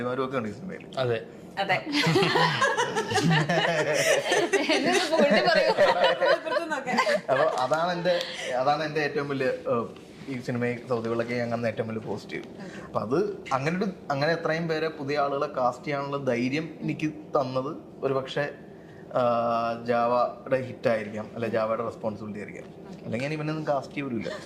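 No technical faults are audible anywhere in the audio.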